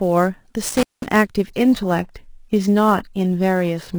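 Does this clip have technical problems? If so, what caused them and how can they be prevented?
Yes. Sample clock jitter runs through the whole clip: the converter's clock wanders by around 10 microseconds, so samples land slightly off time, and the error, roughly 25 dB below the signal, is heard as a rough hiss that rises on loud, bright speech and disappears in pauses. A stable, low-jitter clock or a properly locked interface prevents it.

An intermittent contact appears between 0.69 and 1.16 s: a loose cable or plug briefly opens the line for about 193 ms, cutting the speech out with crackle at either edge and faint hiss in the gap. Secure connectors and replacing worn cables prevents it.

An adaptive stream at a lower bitrate takes over from 1.47 s to the end. The quality suddenly drops with rising codec artefacts, with no gap. This fits a drop from roughly 96 kbit/s AAC-LC to a 16 kbit/s HE-AAC version when the connection slowed. 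A steadier connection or a higher minimum bitrate prevents it.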